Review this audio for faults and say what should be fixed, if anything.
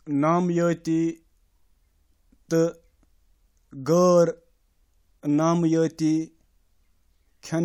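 Nothing stood out on listening, so there is nothing here that needs fixing.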